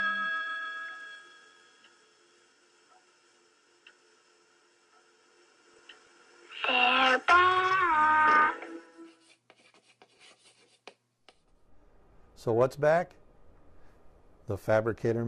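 Weak DAB reception lets bit errors past error correction into the MP2 data, corrupting scale factors so single sub-bands jump in level. This DAB burbling occurs at 0.88–1.03 s, 5.68–6.07 s, 7.63 s, 9.59–10.56 s and 13.23–13.47 s.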